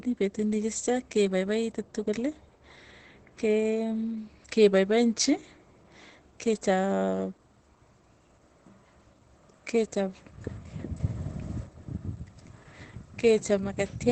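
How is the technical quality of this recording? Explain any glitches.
The recording is heavily degraded, with coded damage throughout and one brief level fault.

Across the whole clip the speech sounds muffled and hoarse, with nothing above about 8.7 kHz. This is most likely Opus compression in its speech (SILK) mode at a very low bitrate, around 12 kbps, which narrows the bandwidth and roughens the voice.

From 11.0 to 11.67 s there is a sudden gain jump: speech and background noise both step up together by about 7 dB, then drop back. A digital gain change applied without any ramp between samples is the likely cause.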